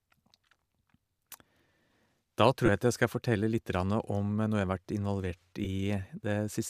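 Speech carried over a Bluetooth link with two spots of lost LE Audio frames: audio frames dropped between 2.66 and 2.69 s and again at 5.65 s, and the decoder papered over each gap by repeating the previous spectrum with scrambled phase. Each loss is a brief noisy smear in place of the speech, roughly 22 ms and 15 ms, which fits three and two 7.5 ms frames. The light graininess around them is likely from LC3 compression.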